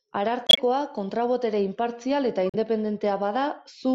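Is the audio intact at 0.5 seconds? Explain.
No. A corrupt frame muted the audio from 0.47 to 0.59 s: damaged compressed frames were rejected by the decoder and replaced with silence. The gap of several frame lengths starts abruptly as true silence, and unlike a skip the speech afterwards keeps its timing.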